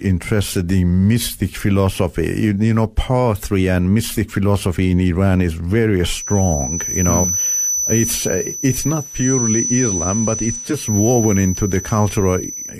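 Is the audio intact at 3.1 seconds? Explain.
Yes, the speech at 3.1 seconds plays through cleanly, with no dropout, click, distortion or other break at that moment.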